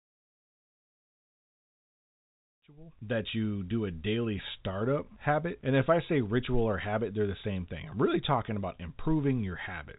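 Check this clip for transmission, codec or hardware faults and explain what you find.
Nothing in the audio stood out on listening as a transmission, coding or hardware problem.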